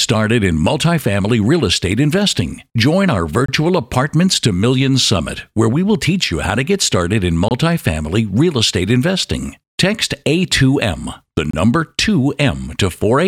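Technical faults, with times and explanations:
3.46–3.48 s, 7.48–7.51 s, 11.51–11.53 s: gap between chunks, 25 ms hard-edged silences every 4.0 s (one right after "to get started in") where consecutive chunks fail to butt together.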